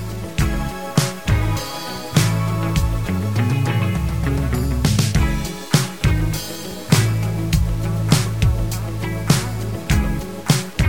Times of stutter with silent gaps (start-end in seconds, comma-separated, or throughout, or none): none